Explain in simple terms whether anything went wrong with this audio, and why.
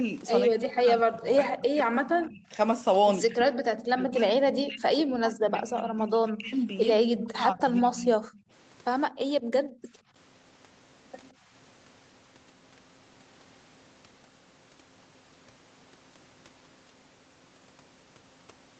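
Two things go wrong, both tied to echo control on a call.

The first is speech suppressed in double talk. The voice keeps sinking and breaking up from 0.48 to 2.53 s, 3.27 to 3.64 s, 3.9 to 6.69 s and 7.05 to 8.17 s. The drops are deep, nearly to silence, though the short one at 3.27 s is milder. The likely cause is that both sides spoke at once. The echo canceller could not tell this talker from the returning loudspeaker sound, so it turned both down.

The second is background gated by the echo canceller. The room sound briefly drops away at 8.45 to 8.5 s, 9.09 to 9.21 s, 9.4 to 10.14 s and 11.33 to 11.45 s. Each time, the canceller clamped the microphone while the far end's sound played and then let go. Most of these dips are deep. The one at 11.33 s is only a slight fade. The longest gap, near 9.4 s, lasts under a second.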